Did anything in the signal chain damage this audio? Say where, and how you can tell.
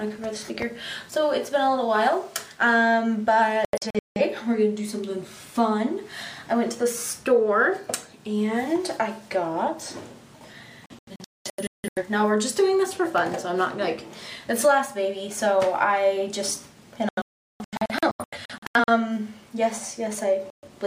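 Yes. The sound mutes in bursts of short holes at 3.65–4.21, 10.86–12.03, 17.09–18.89 and 20.50–20.68 s, the longest gap 384 ms. This is a digital broadcast dropout: the receiver lost reception and muted failed frames, consistent with blocks of about 43 ms.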